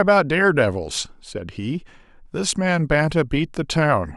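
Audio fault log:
No faults detected in this speech recording.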